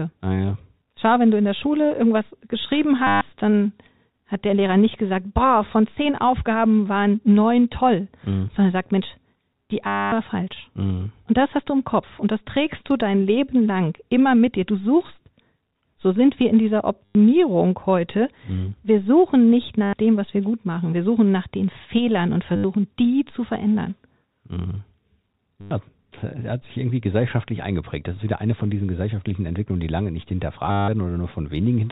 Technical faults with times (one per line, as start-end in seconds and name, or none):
3.07-3.21 packet loss with last packet repeated
9.87-10.12 packet loss with last packet repeated
17.05-17.15 packet loss with last packet repeated
19.83-19.93 packet loss with last packet repeated
22.56-22.64 packet loss with last packet repeated
25.61-25.71 packet loss with last packet repeated
30.71-30.88 packet loss with last packet repeated